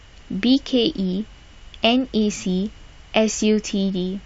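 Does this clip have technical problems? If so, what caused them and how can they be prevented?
Yes. Clock drift buffer slips: two devices likely ran on separate clocks roughly 700 ppm apart, so the buffer periodically dropped or repeated a small block of samples. The result is about four regular clicks in the speech, every 1.07 s from 0.23 s to 3.42 s. Locking both devices to one shared clock, or resampling to compensate for drift, prevents this.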